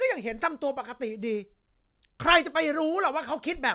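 No technical faults can be heard in this speech.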